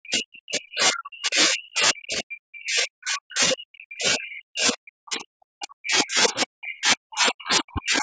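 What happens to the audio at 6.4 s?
Right around 6.4 s there's a brief burst of the other side's voice leaking through, from 6.41 to 6.45 s. It sits roughly 15 dB below the talker, a scrap of a second voice. The likely cause is the echo canceller missing a bit of loudspeaker playback in the mic signal.

Underneath that, the talker is being pushed down the whole way through, which is speech suppressed in double talk. The level dips, sometimes by as much as 40 dB. This is likely the canceller ducking everything when both ends overlap.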